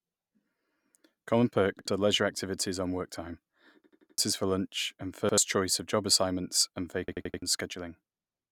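Speech, hit by a repeated buffer fault four times: quick single stutters at 1.79 s (before "are leisure activities on") and 5.29 s (before "choice of job assignments"), and longer 0.34 s stutters at 3.84 s and 7.08 s. Each chunk is 85 ms, which fits a 4096-sample buffer replayed when fresh audio arrived late.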